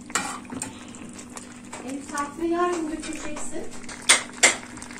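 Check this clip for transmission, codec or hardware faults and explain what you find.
No faults can be heard anywhere in the clip. Nothing in the sound calls for a closer look at any stage of the chain.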